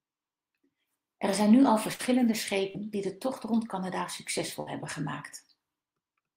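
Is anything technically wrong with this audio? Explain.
Yes, the speech has three dropouts from packet loss.

Burst of packet loss at 1.93 to 2.01 s and again at 4.60 to 4.68 s: a run of packets was lost or arrived too late to play, so the receiver carried the last sound forward and turned it down, filling about 54 ms the first time and 60 ms the second. Each time, 60 ms of real audio is lost, and the speech resumes slightly further on after a brief fading stretch.

Short concealed packet loss at 2.71 to 2.76 s: a shorter hole reached the decoder empty, and the receiver bridged about 34 ms by extending the preceding sound from its pitch or as shaped noise before blending back into the real signal. About 40 ms is missing, heard as a quick smear or wobble where a short sound can slip away.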